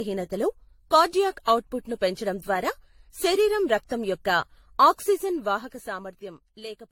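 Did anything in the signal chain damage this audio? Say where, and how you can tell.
Yes: generation loss at the codec stage, throughout the speech. The sound is swirly, hollow and smeared, consonant attacks blur, and nothing remains above 16.6 kHz. The likely cause is about five successive lossy AAC encodes, each requantising on a shifted frame grid. A single low-bitrate pass would sound thinner but not this cumulatively hollow.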